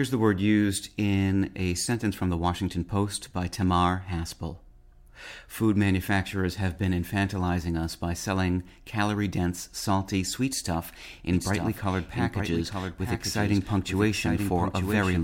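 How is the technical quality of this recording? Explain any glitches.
From 11.33 s to the end, the speech has a doubled audio track: a second full-band copy trails about one second behind, roughly 5 dB quieter, with no decay or room colour. It likely comes from a slower capture path. The waveform shows a sudden onset of overlapping duplicate envelopes, and the spectrogram shows every pattern repeated a second later.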